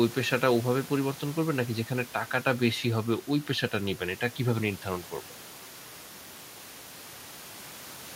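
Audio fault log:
No faults were detected in this speech recording.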